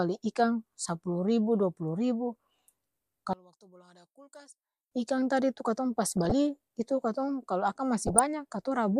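A speech clip with two kinds of fault. From 3.33 s to 4.92 s, just before "ikang tadi tu katong", the voice collapses by about 28 dB into a faint residue, as if the centre of the image had been scooped out. The likely cause is one channel inverted: with one side's polarity reversed, the centred voice common to both channels cancels on a mono sum, leaving only the small left–right difference. DAB burbling appears at 6.05–6.32 s and again at 8.07–8.19 s as short blips of noise layered over the speech. Weak reception lets bit errors, at a rate of a fraction of a percent, slip past error correction into the MP2 stream, so corrupted samples put short noise blips in single sub-bands and corrupted scale factors make sub-bands jump in level for up to a frame. The first burst is longer, consistent with roughly a dozen damaged frames, and the second is shorter but denser in errors.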